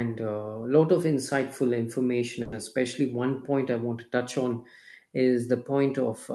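From 2.42 to 2.53 s, a brief buzzing hiss fills about 100 ms before the speech resumes intact: a call audio freeze, likely from delayed packets emptying the jitter buffer.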